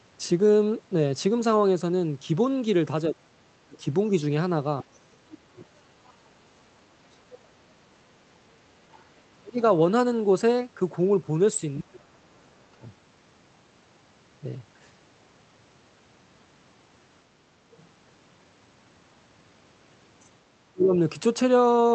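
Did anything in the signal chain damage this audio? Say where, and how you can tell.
Yes, at the call-processing stage, in the echo canceller. The speech is ducked by about 25 to 35 dB at 3.09–3.81, 4.84–7.94, 9.1–9.61, 11.8–12.82 and 20.72–20.92 s. This is speech suppressed in double talk, likely from the canceller attenuating both talkers at once. Unlike network dropouts, these dips follow the overlapping talk rather than leaving clean gaps.

The other side's voice leaking through appears from 4.41 to 6.09 s at about 25 dB below the speech, and from 8.96 to 9.72 s at about 35 dB below. This is likely loudspeaker echo that the canceller did not fully remove. Room reverb would smear the talker's own voice, but this is a separate second voice riding underneath, all within the roughly 8 kHz band of the Opus call path.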